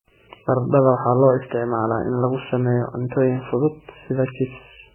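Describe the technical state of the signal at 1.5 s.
At 1.5 s the speech is band-limited, with nothing above 3 kHz, and carries mixed smeared, warbling compression artefacts, as it does throughout the clip. This is likely transcoding between lossy codecs. A very low-rate MP3-style encode fixed the cut-off, and a later HE-AAC-style encode re-coded those artefacts and added its own.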